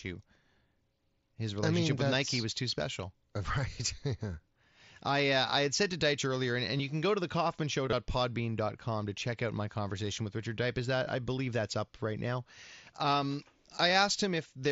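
Concealed Bluetooth headset packet loss occurs at 6.77–6.79 s, 7.86–7.93 s and 11.04 s. Missing headset packets were filled by repeating the best-matching recent waveform, so each gap becomes a brief buzzy hold. At 7.86 s the losses scatter across 60 ms.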